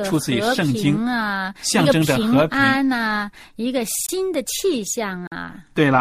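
Blocks of digital silence break this speech clip at 4.06 s and 5.27 s, lasting about 23 ms and 46 ms. Each time, the signal drops straight to silence and returns without any fade, and the longer gap registers as a brief hole. The lengths fit whole buffers of 1024 and 2048 samples going unfilled, which points to the program missing its output deadline.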